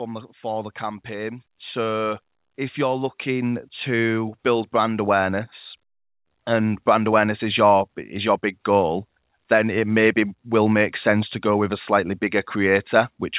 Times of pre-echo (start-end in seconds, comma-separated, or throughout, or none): none